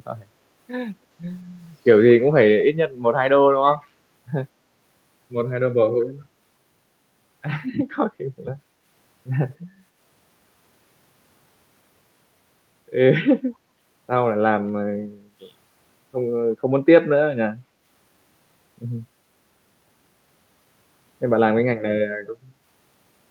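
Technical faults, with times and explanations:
2.29–2.33 s and 3.73–3.86 s, echo leak: faint copies of the speech return about 230 ms late, roughly 25 to 30 dB down, likely from a far-end loudspeaker echo the canceller missed. A spectrogram shows weak repeats of earlier harmonic patterns, shifted right.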